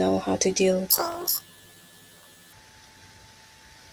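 Speech clip with planar audio read as interleaved from 0.90 to 2.53 s: 23.2 ms blocks, likely 1024 samples, each replay at double speed, an octave high with 43 Hz flutter. The spectrogram shows harmonics spread twice as wide with regular vertical striping.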